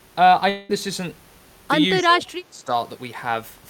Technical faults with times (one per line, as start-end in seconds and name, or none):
0.49-0.71 long network dropout
2.02-2.72 speech suppressed in double talk